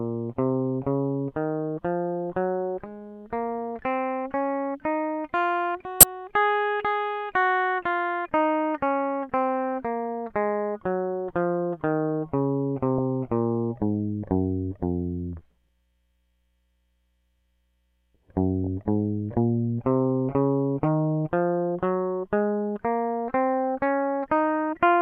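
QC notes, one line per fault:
6.00–6.03 s: corrupt frame decoded. A couple of damaged compressed frames played anyway, scattering energy into wrong frequencies. It gives a loud burst, peaking around -5 dBFS, over the music.
18.64–18.67 s: corrupt frame decoded. Again roughly two frames with flipped bits were decoded as they were. The misplaced energy makes a much quieter, brief blip.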